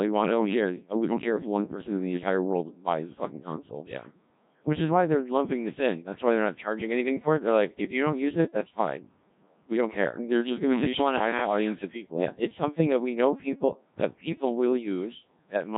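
From start to finish, the speech passes through the Codec 2 vocoder. Heavy codec damage is audible throughout. The original waveform is gone. Only pitch, voicing, energy and a rough spectral shape survive, and the decoder rebuilds the voice from sine waves. The result sounds robotic and buzzy. The coarseness fits a low mode of about 1.3 kbit/s. There is nothing above 3.8 kHz, so the sound is dull and narrow.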